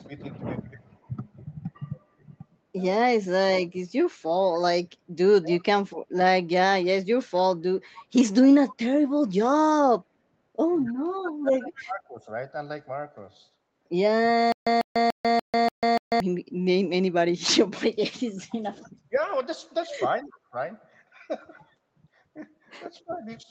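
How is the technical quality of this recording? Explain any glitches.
The recording has clear technical problems: the speech is repeatedly pushed down, a faint delayed echo returns, and one passage stutters. The audio is band-limited, with nothing above 8 kHz, as expected from a call path.

Speech suppressed in double talk occurs from 0.05 to 5.65 s, from 10.86 to 12.25 s, and from 18.31 s to the end. The level dips by up to about 20 dB in the first stretch, about 30 dB in the second and about 25 dB in the last. The first stretch is affected for roughly half a second in total, and the second for roughly 1.5 s. The likely cause is both sides talking at once. The echo canceller could not tell the near talker from loudspeaker echo, so it attenuated everything, and the voice drops or thins in patches.

Echo leak appears as a copy of a voice arriving 266 ms late. It is heard from 0.32 to 2.22 s at about 35 dB below the speech, from 5.85 to 11.81 s at about 20 dB below, from 18.82 to 19.2 s at about 35 dB below, and briefly at 23.1 to 23.18 s at about 25 dB below. 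The far end was likely on a loudspeaker, and its canceller failed to remove all of the pickup. The residue came back as a faint, delayed doubling that is most audible in the 5.85 to 11.81 s stretch.

Stutter with silent gaps runs from 14.52 to 16.20 s. The same 147 ms fragment plays six times, each followed by about 143 ms of digital silence, which gives a steady repeat every 291 ms. The likely cause is a stalled stream: each retry replayed the last buffered fragment and then ran dry. The audio that should have filled that interval is missing, and the passage sounds like a rhythmic, mechanical skip.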